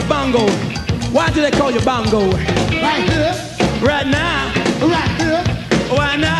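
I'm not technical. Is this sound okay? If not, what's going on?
No. At 4.57 s there's a bit error spike: one digital value got corrupted, making a single sharp tick. Unlike a dropout, no sound goes missing.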